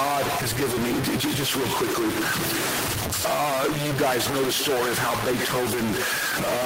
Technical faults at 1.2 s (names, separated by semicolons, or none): stuck bit